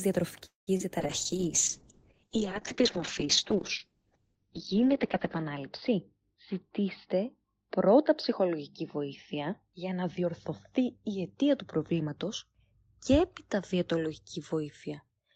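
A speech recording of a call with several network faults. From 0.45 to 0.69 s the sound stalls. The last sound carries on briefly, then about 150 ms of silence follows. Speech resumes where it stopped, with nothing lost. This is likely a call audio freeze: delayed packets emptied the jitter buffer, inserting roughly 217 ms of delay. At 0.77 to 0.81 s there is short concealed packet loss. About 20 ms of audio never arrived. The receiver patched it by extending the preceding sound, giving a brief smear. From 1.01 s to 15.09 s a call bitrate drop takes hold. The encoder falls from 32 kbps to 7 kbps, staying at its lowest for about 4 s. Bandwidth shrinks from 20 kHz to 6 kHz. The speech turns muffled and rough. Two jitter buffer speed-ups follow as the receiver trims excess buffered audio. The first runs from 10.19 to 10.28 s at 160% speed, removing about 50 ms. The second runs from 10.78 to 12.25 s at 108%, removing about 150 ms. 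Pitch stays the same, but the speech sounds hurried.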